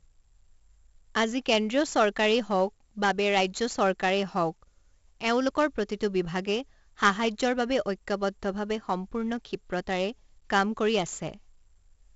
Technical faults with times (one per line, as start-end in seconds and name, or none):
0.00-12.16 4-bit ADPCM compression